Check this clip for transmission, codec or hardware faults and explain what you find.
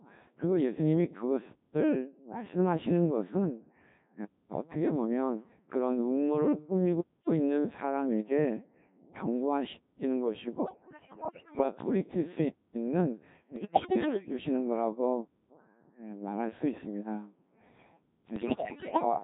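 Three kinds of fault are present: heavy low-rate vocoder coding throughout, three bursts of bit errors, and one silent gap between chunks.

Codec 2 vocoder, whole clip: the speech is rebuilt from sine waves using only pitch, voicing, energy and a spectral envelope, which fits Codec 2 at around 1.3 kbit/s. It sounds robotic and buzzy. Unlike a conventional low-bitrate codec's smearing, the original waveform is gone entirely.

Bit errors on digital voice radio, 10.64 to 11.63 s, 13.56 to 14.33 s and 18.36 to 19.05 s: corrupted bits reached the vocoder's frame parameters, so pitch, level and tone jump into warbles, bleeps and gibberish. Sound keeps playing throughout, which distinguishes this from a dropout. The first and last bursts are harsher.

Gap between chunks, 15.26 to 15.51 s: a 250 ms hard-edged hole of silence sits at a join between 2.5 s chunks. Unlike a dropout, no audio is missing. 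Playback simply pauses and resumes where it left off.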